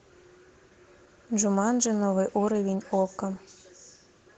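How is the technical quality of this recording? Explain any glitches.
The recording is clearly degraded by Opus voice compression, audible throughout the speech. A low-rate linear-prediction core with a thin upper layer leaves it hoarse and slightly robotic, unlike plain band-limiting, which only muffles. The damage fits a rate around 16 kbps.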